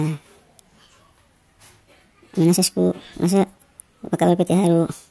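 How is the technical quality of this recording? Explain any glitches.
The playback runs at the wrong sample rate for the whole clip. The samples are read out 1.5 times faster than they were captured, with no rate conversion, which fits 16 kHz material played as if it were 24 kHz. Because speed and pitch are tied together here, the speech is hurried to 1.5 times its natural pace and every voice is raised by about 7 semitones, giving a thin, chipmunk-like quality from start to finish.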